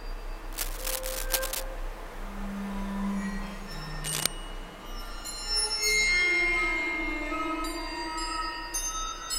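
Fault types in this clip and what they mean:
Cable scratch noise: dense, irregular rustling over the sound from 0.53 to 1.63 s, somewhat below signal level, and from 4.04 to 4.27 s, about as loud, likely from a worn cable or connector moving. Unlike single clicks, it comes as rough clustered bursts.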